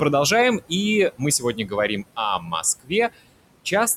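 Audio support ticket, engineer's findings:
Noise suppressor artifacts, whole clip. Residual background level sinks between phrases and swells back under speech. Suppressor gating room noise per frequency band, frame by frame, pulling it down by about 21 dB in gaps. Room noise sits about 17 dB under speech. The room noise is acoustic, but the pumping level is processing. Steady room noise alone would hold a constant level and timbre.

Speech cut by the noise suppressor, 1.39–1.72 s, 2.39–2.63 s, 2.8–2.92 s. Soft sounds swallowed, dipping about 10, 9 and 20 dB. Roughly 150 ms, 150 ms and 100 ms affected. Suppressor misclassifying quiet speech as noise and attenuating it with the background. Unlike packet loss or dropout, there are no hard silences or clicks. Attenuation is smooth and partial, and the background ducks along with the speech.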